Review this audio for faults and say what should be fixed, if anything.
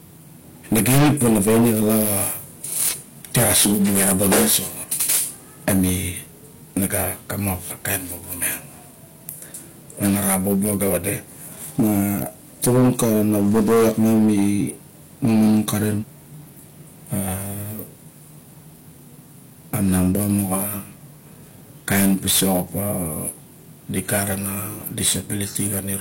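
Hard clipping runs through the entire speech clip. The signal hits the ceiling with about 22 dB of overdrive, so something like 7% of samples get sheared flat. That level of overload isn't just an occasional crackle on peaks. The flat tops spray harmonics up high, and every loud syllable comes out with a harsh fuzz. To prevent it, drop the input gain or the stage before the converter so the peaks stay under full scale.

Compressed frames skipped shows up six times, at 1.16–1.22, 2.88–2.95, 4.79–4.85, 7.67–7.73, 9.99–10.04 and 15.98–16.04 s. Each time, the audio lurches forward, losing roughly a fifth of a second in the first four and about half a second in the last two. The jumps fit whole frames of around 46 ms going missing. To prevent it, check the file's integrity end to end and re-encode from a clean source if the frames are damaged.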